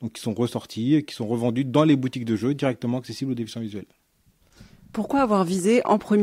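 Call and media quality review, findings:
No faults found in this speech recording.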